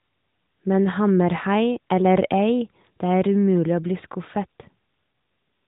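Speech over an AMR narrowband mobile link, with nothing above 4 kHz. From 5.04 s to the end, an AMR rate drop makes the voice rougher and more synthetic. The band holds and there is no gap. The sound fits the codec stepping down from 12.2 to 5.9 kbps.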